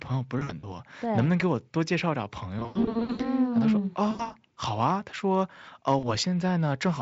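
Speech here, with VoIP packet loss concealed by the speech codec hitting four spots: 0.39 to 0.67 s, 2.59 to 3.26 s (the worst, with about 360 ms missing in gaps up to 100 ms across 600 ms), 4.11 to 4.33 s, and 5.99 to 6.15 s. Each time the decoder stretches its last pitch and filter into a buzzy tone or coloured noise that fades, and the voice stays weak for a beat after packets return. The gaps fit 20 ms frames. The Speex coding itself sounds clean.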